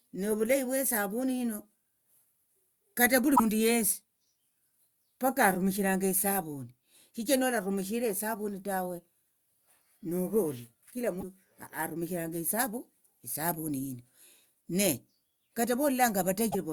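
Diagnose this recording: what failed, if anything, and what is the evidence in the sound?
Codec: short glitches at 3.35–3.40 s, 11.20–11.24 s and 16.50–16.55 s, likely a broken MP3 bit reservoir, with frames decoding another frame's borrowed bits.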